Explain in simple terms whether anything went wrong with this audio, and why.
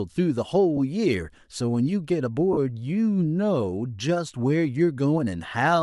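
Lost LE Audio frames at 0.77 s and from 2.53 to 2.58 s: brief dropouts, about 10 ms and 40 ms long, likely in the Bluetooth LC3 link, where the decoder patched in a noisy copy of the preceding speech.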